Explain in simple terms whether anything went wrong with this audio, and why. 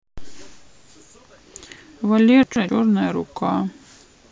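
Something did go wrong, at about 2.43 to 2.69 seconds. This fault is called chunks out of order. Audio travels in small pieces, here about 128 ms long. One piece arrived late and played after the piece that should have followed it. So two short bits of speech swap places. Nothing goes missing, but that moment sounds jumbled. You may also hear clicks where the swapped pieces join.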